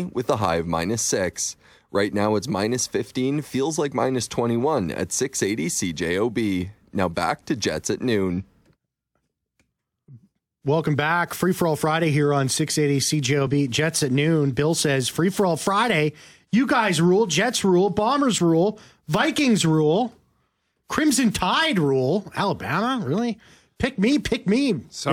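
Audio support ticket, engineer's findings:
No audible faults found on playback; nothing to escalate.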